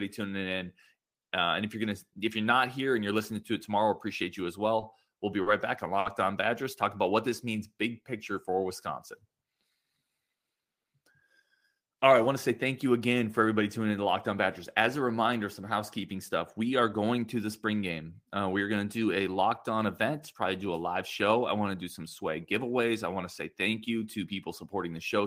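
Four short stalls from late packets come first, at 4.80, 5.14, 5.42 and 5.99 s. Each time a packet arrived late and the jitter buffer ran dry. The receiver held the last sound for 20, 20, 40 and 60 ms, then carried on from the same point. Nothing is lost. The speech catches briefly, with a held sound and a slight buzz or dip. The last stall is the longest.

A jitter buffer slow-down follows from 6.98 to 8.56 s. The buffer needed more reserve, so the receiver repeated single pitch periods and bits of pauses. That adds 134 ms in all. The speech runs at 92% speed with its pitch unchanged. Sounds are drawn out, and there may be a slight warble.

A jitter buffer speed-up runs from 10.60 to 12.65 s. Here the buffer held too much audio. The receiver trimmed short pieces, one or a few pitch periods at a time, and removed roughly 150 ms. The speech plays at 107% speed, still at the same pitch. It sounds hurried through this stretch.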